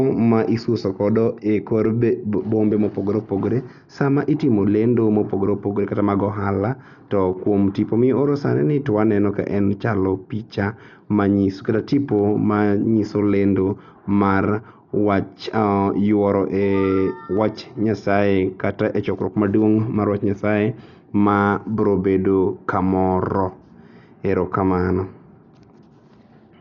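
Dolby Digital compression, likely the cause, runs throughout this speech: nothing is left above 7 kHz, and the sound is dull, with rough, fluttering noise around tones. This heavy damage points to a very low bitrate near 48 kbps, where the encoder narrowed the band and left many frequency lines without mantissa bits, so the decoder filled them with dither noise.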